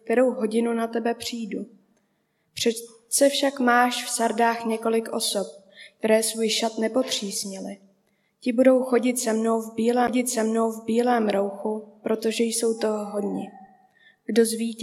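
At 10.07 s the audio ticks and mutes for roughly ten milliseconds, then resumes from a different point, a classic CD skip. A knock or a disc flaw threw the laser onto another turn of the spiral, so playback jumped by whole revolutions.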